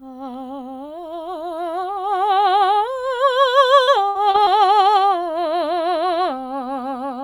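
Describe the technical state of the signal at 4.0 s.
At 4.0 s the signal sits inside a stretch of repeated packet loss (robotic sound) from 3.83 to 4.48 s. Four gaps, the longest 57 ms, were patched by extending the preceding audio, so about a quarter of that span is concealment, leaving the music choppy with pieces missing.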